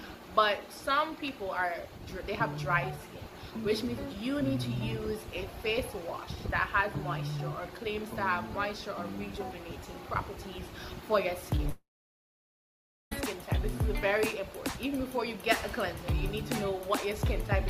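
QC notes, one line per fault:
11.69–13.13 s, long network dropout. The sound breaks off and the last moment is stretched into a short tail of buzz or hiss that fades within a few tenths of a second. About 1.28 s of near silence follows. The audio then resumes further along, with roughly 1.4 s of material simply gone rather than delayed. This is likely a gap in packet delivery, with the receiver concealing the loss briefly before giving up and muting.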